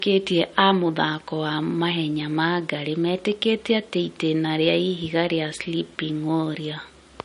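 Speech, with nothing above 10.6 kHz throughout: a flat spectrogram ceiling there points to low-bitrate audio saved at a high bitrate, likely a 40 kbit/s MP3 re-encoded at 320 kbit/s.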